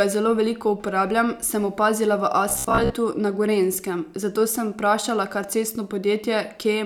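The clip is speech. From 2.49 to 2.96 s it becomes a rigid, metallic buzz. This is robotic sound from repeated short buffers. The buzz sits at 66.7 Hz, a 15 ms loop, and about half the audio is repeats. Audio arriving too seldom is the likely cause.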